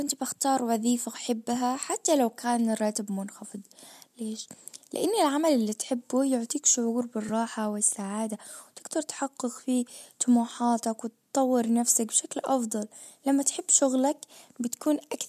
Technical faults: AAC frame loss with concealment

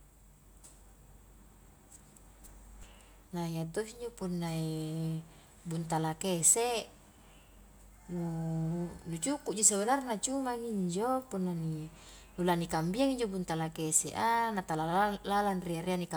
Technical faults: none

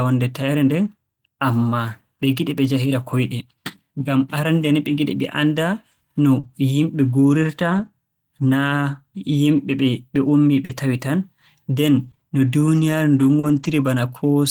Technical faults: lost packet rebuilt from error correction; short concealed packet loss; scattered short gaps

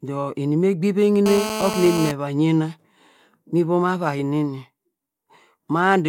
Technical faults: GSM phone buzz

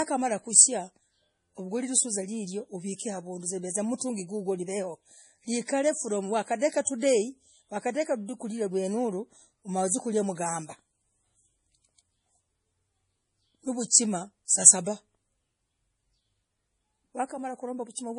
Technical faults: MP3 compression; pre-echo

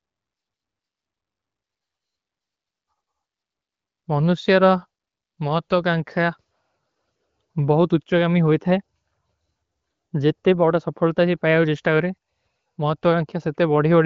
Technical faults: none

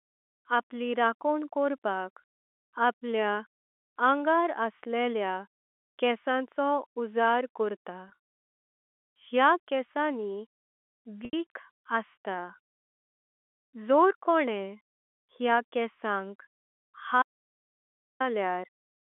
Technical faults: packet loss with pitch repetition; audio dropout to silence

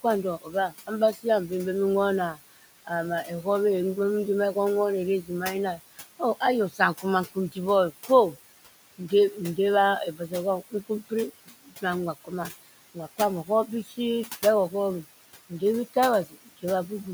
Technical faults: noise suppressor artifacts; speech cut by the noise suppressor

